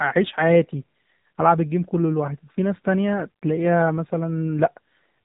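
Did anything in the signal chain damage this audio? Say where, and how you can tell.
Yes: the codec stage, an AMR narrowband mobile codec, throughout. Nothing passes above 3.8 kHz, and the speech is plainly buzzy and synthetic, which fits a low 7.4 kbps mode.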